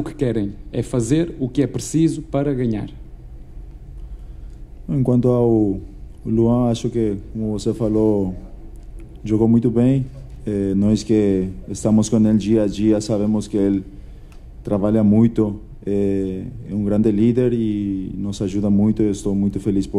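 Listening through the whole clip, nothing stood out as a technical problem at any point.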